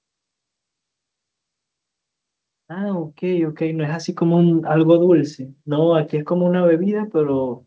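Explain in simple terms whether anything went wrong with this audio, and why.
Between 2.67 and 4.72 seconds the speech gets steadily louder, and this is automatic gain rising: the system judged the input too quiet and slowly turned it up. A speaker leaning closer would raise only the voice, but here the background noise swells too, over about two seconds.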